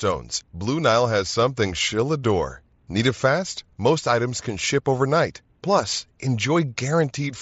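No technical faults are audible in the speech, which arrives over a Bluetooth headset link using the mSBC codec at 61 kbps, so its bandwidth tops out around 8 kHz with only the light coding texture typical of that codec.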